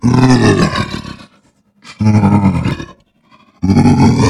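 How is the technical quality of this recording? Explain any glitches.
The recording has three glitches: the sound jumps abruptly at 0.62 s, 1.88 s and 2.71 s. Each is most likely a dropped buffer (overrun), where the software failed to collect samples before the hardware overwrote them, so a chunk vanished and the surrounding audio was spliced together. Roughly 40 ms is lost at 0.62 s and about 70 ms at each later point. You hear a skip forward. A waveform shows a sudden discontinuity, and a spectrogram shows a thin vertical broadband line.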